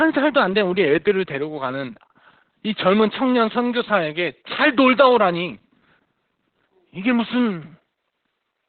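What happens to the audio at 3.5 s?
At 3.5 s the speech carries Opus voice compression, which runs through the entire clip rather than appearing at that moment. Nothing is heard above about 4.4 kHz, so the sound is narrowband, and the coarse, heavily damaged excitation coding gives a hoarse, slightly robotic texture, which fits the SILK coder at around 8 kbps. A plain low-pass filter would only muffle the speech; this roughness and robotic quality in the voice itself marks it as codec damage.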